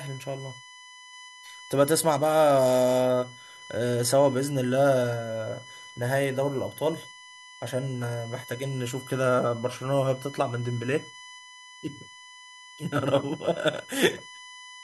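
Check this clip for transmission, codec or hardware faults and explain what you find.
One hardware fault is present: USB whine under the speech for the whole clip. The bus's 1 ms frame timing leaks current ripple through power or ground, giving a fixed 1 kHz whine with harmonics, strongest at 2 kHz, about 20 dB below the speech.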